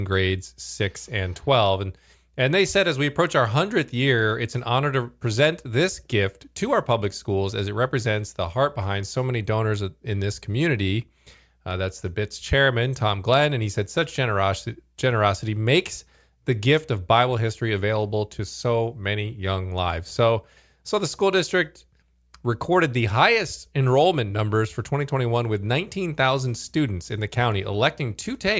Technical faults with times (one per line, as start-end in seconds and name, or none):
none